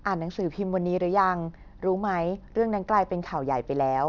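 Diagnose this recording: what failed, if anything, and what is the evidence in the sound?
Aliasing from an unfiltered sample-rate conversion: sibilants go gritty throughout as energy folds around 6 kHz, about 35 dB down, which fits a 48 kHz to 12 kHz drop.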